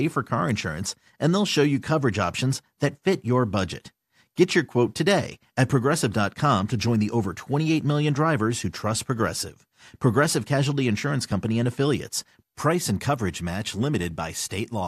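No technical faults can be heard anywhere in this speech recording.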